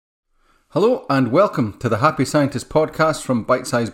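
No technical faults can be heard in the recording.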